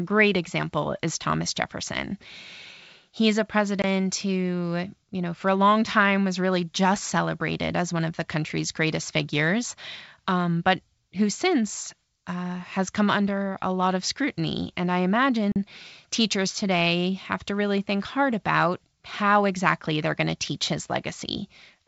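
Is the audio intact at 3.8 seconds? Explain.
No. From 3.82 to 3.84 s, just before "who you know for", there is packet loss on an ADPCM call: about 20 ms, roughly one packet, went missing and was filled with silence. Because the decoder's adaptive predictor and step size then no longer track the sender's, the speech resumes distorted before settling. On a waveform this shows as an abrupt flat gap; on a spectrogram, as a narrow hard-edged vertical blank across all frequencies.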